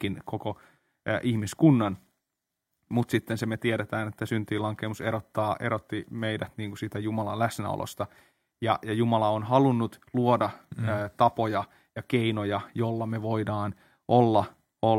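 No technical faults can be heard in this recording.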